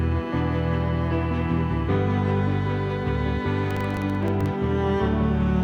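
From 3.71 to 4.46 s there is processor overload crackle. The processor repeatedly failed to deliver its very short buffers, around 1.5 ms each, in time. About twenty buffers dropped to silence, and their hard-edged gaps merge into a gritty crackling burst over the sound.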